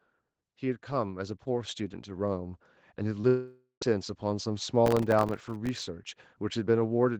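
From 0.42 to 2.68 s an automatic gain rising fault lifts the level by about 7 dB. The control judged the input too quiet and kept turning it up, so speech and background swell together. On a waveform the envelope widens steadily, and a spectrogram shows every band brightening evenly.

At 3.21 to 3.25 s a short concealed packet loss leaves about 20 ms of audio missing. The receiver bridged it by extending the preceding sound and crossfading back, heard as a brief smear or wobble. A spectrogram shows a tiny blurred patch.

From 3.27 to 3.83 s comes a long network dropout. The likely cause is that roughly 540 ms of packets never arrived. The last sound is stretched into a fading buzz or hiss for about half a second, then about 120 ms of silence follows before speech resumes further on. On the waveform this is a decaying tail ending in flatline, and the spectrogram shows smeared, frozen bands dying out.

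Between 4.86 and 5.83 s a processor overload crackle rides on the speech. Dozens of tiny buffers of a millisecond or two were not filled in time, and each miss left a hard-edged silent gap, giving a gritty, tearing crackle. The waveform shows a rash of brief dropouts to silence, and the spectrogram shows dense vertical broadband streaks.

The Opus call path caps content at 8 kHz, so the spectrogram is empty above that line throughout.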